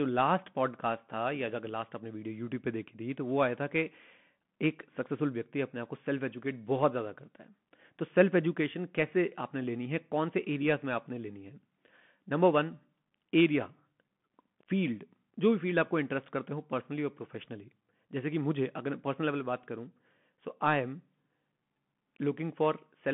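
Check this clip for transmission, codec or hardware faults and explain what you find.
One fault runs through the whole clip: the sound of a Bluetooth CVSD headset codec. The speech is confined to a narrow telephone-like band of roughly 150 Hz to 3.4 kHz, with nothing above 3.8 kHz. CVSD sends a single up-or-down bit per sample and adapts its step size, which fits a 64 kbps link. The step lags on loud, bright sounds, so they distort, s sounds come out scratchy, and a grainy hiss sits beneath the speech.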